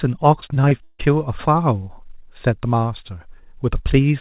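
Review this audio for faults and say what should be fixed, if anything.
Repeated packet loss (robotic sound) runs from 0.40 to 1.01 s. Several dropouts, the longest 155 ms, are each patched by stretching the preceding sound, so about 41% of that span is filled-in audio. The result is choppy speech with pieces missing under the telephone-band 4 kHz ceiling of a G.711 call path. To prevent it, stabilise the network link, using a wired connection or QoS priority, and enable forward error correction or a deeper jitter buffer.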